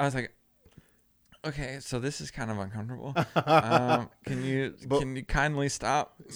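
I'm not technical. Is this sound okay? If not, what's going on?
Yes, it's fine; there's nothing wrong with how this recording sounds, so you can relax about it.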